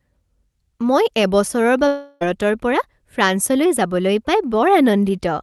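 Just after "মই এবছৰৰ", from 1.87 to 2.23 s, the speech breaks off and a smeared, buzzy continuation of the last sound fills the gap before speech resumes with about 0.34 s missing. This is most likely a long network dropout, with concealment stretching the final sound across nearly the whole gap, so no true silence opens up. Its length and fading buzz set it apart from a brief packet-loss click. The surrounding speech shows the call codec's band limit near 12 kHz.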